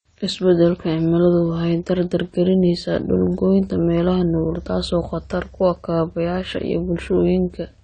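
From start to finish the speech carries AAC compression damage, likely from a low-bitrate encode around 32 kbps. Nothing sits above 9 kHz, so sibilants sound dull and fizzy. A spectrogram shows a hard ceiling at 9 kHz.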